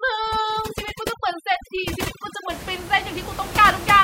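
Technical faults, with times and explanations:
0.00–2.50 s, overdone noise removal: an over-strong noise reducer cuts bands near its noise estimate, leaving a lowered background that breaks into twinkling specks, with quiet parts of the speech cut along with it.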